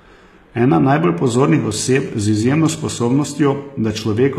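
Throughout the speech, plainly audible HE-AAC compression damage is present. Nothing remains above 14.9 kHz. The treble is likely rebuilt from copied lower bands, which fits a bitrate near 20 kbps. Its harmonics misalign, so s sounds turn gritty and lispy.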